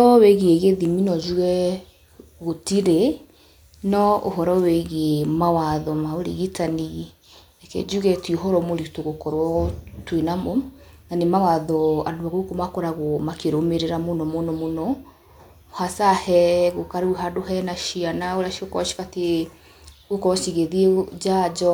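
No technical faults are audible anywhere in the recording.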